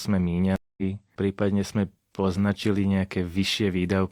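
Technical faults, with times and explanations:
0.56–0.83 s, stream reconnect: The connection dropped and the player lost its place in the stream. The speech cuts out and about 0.21 s of silence follows while it reconnects. A fresh decoder then starts mid-stream. The speech resumes roughly a tenth of a second further on than where it stopped, so a short stretch is skipped. The jump forward fits a live stream, which keeps moving during the break.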